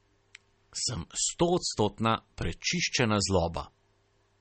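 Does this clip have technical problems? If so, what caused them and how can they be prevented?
Yes. The speech sounds watery and swirly throughout, with nothing above 8.4 kHz. The likely cause is MP3 compression at a bitrate around 32 kbps. The encoder ran short of bits, so it cut the treble and let weak frequency components flicker between frames. Encoding at a higher bitrate prevents this.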